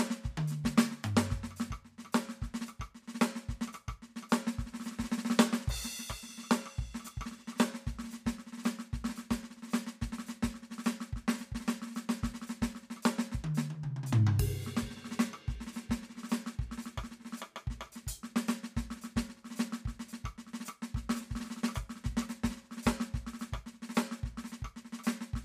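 No technical faults can be heard in this music.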